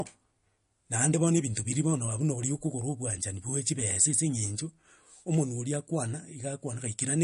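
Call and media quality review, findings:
Watery, swirling speech throughout, treble gone above 10.6 kHz; likely MP3 compression, sounding like a low bitrate near 40 kbps. Frame-to-frame flicker separates it from a plain low-pass filter.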